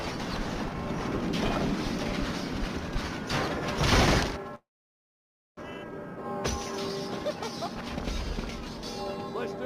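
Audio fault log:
4.55–5.61 s, long network dropout: a brief fading fill, then about 0.93 s of silence, and the sound resumes with roughly 0.6 s missing. This is likely a stalled stream, unlike a click-sized packet loss.
5.62–6.23 s and 7.28–8.78 s, jitter buffer speed-up: the sound runs fast, at 120% and then 108%, each time shedding about 150 ms of backlog. The pitch stays unchanged, unlike resampling.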